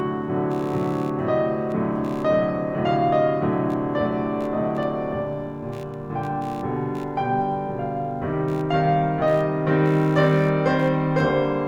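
Throughout the music runs computer activity noise: a buzzing chirp pulsing around 70 times per second, roughly 30 dB below the signal. It comes from processor or peripheral load currents disturbing the audio ground, and on a spectrogram it shows as faint vertical striations at regular intervals.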